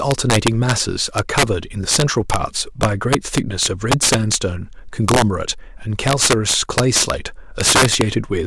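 All the way through this speech you get integer overflow: the signal's been pushed about 9 dB too hot, and instead of limiting, the loudest peaks (around one percent of samples) wrap to the opposite sign, so they come out as harsh cracks far nastier than clipping.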